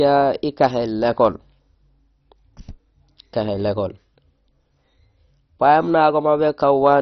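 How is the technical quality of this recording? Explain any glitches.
Technical quality is poor throughout this speech clip. MP2 compression is the likely cause: starved sub-bands leave nothing above 6.1 kHz and coarse, gurgling texture, consistent with a very low bitrate. A spectrogram shows a hard ceiling with flickering upper bands.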